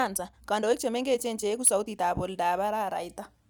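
A time-stretched section runs from 0.0 to 2.06 s: the speech plays about 1.45 times faster at unchanged pitch, likely from software dropping short pieces, sounding rushed.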